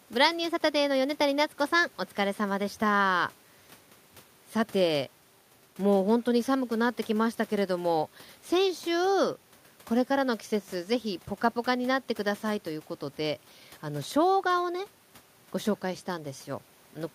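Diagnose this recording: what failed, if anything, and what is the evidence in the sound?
Nothing failed; no faults heard.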